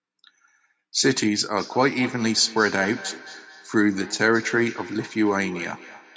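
From 1.55 s to the end there's feedback echo between two devices. One device replays the call, the other's mic catches it, and neither echo canceller removes it. The speech comes back roughly every fifth of a second, thinner and ringier each time, peaking about 16 dB below the direct speech.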